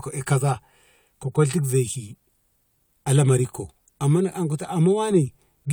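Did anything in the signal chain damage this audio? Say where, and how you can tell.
No, nothing in this speech recording shows damage from any stage of the signal chain, with the level, timing and continuity of the signal holding steady throughout.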